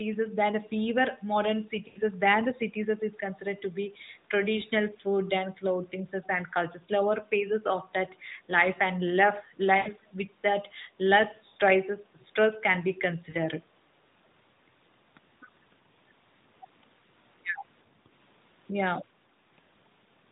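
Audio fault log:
1.88, 9.78, 11.48, 13.30 s: lost AMR speech frames. Gaps of 80, 80, 60 and 40 ms are bridged by repeating the last pitch with decaying gain. This gives a brief drawn-out warble, seen as smeared, fading harmonics below 4 kHz.
3.89–4.00 s: background gated by the echo canceller. The room noise dips by about 7 dB for about a tenth of a second, a short notch in the waveform's noise floor.
12.19–12.25 s: echo leak. A faint copy of the voice returns 366 ms late, about 35 dB down. This is likely residual loudspeaker pickup the far end's canceller missed, and it shows as a weak, ghostly harmonic trace.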